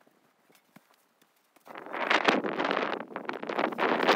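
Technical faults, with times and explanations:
Nothing stood out on listening that would count as a technical fault.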